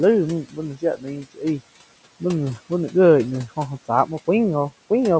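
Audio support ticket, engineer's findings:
Noise suppressor misclassifying speech as noise, 0.45 to 0.58 s: gain pulled down about 13 dB on speech energy, around a tenth of a second affected. Speech there sounds swallowed, faint against the room noise.

Same speech cut by the noise suppressor, 0.74 to 1.61 s, worse: attenuation up to about 16 dB, about 0.4 s of speech turned down in patches. The passage fades, sounding swallowed in places.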